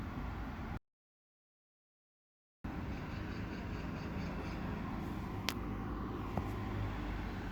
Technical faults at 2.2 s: audio dropout to silence

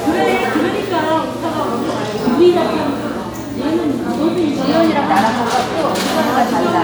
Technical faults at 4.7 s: none

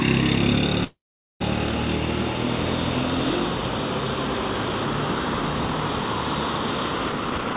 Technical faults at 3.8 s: none

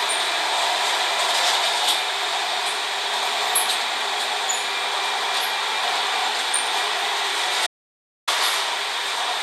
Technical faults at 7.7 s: audio dropout to silence

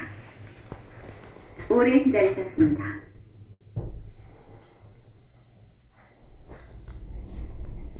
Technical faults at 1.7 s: none

